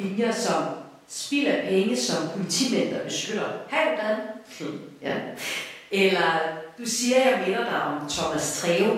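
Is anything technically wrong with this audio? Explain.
No, nothing is technically wrong with this audio.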